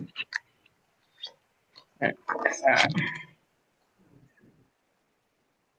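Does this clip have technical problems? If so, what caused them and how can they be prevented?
No, nothing in this clip points to a technical fault, so there is no cause to trace and nothing to prevent. Every part of the audio can be heard without any fault.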